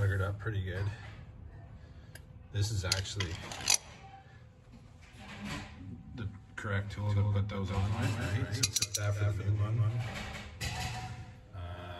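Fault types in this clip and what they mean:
Doubled audio track: from about 7.07 s to the end, a second full-band copy of the sound trails the original by around 200 ms, a few dB quieter, with no decay or room colour. It's likely a second capture through a slower path.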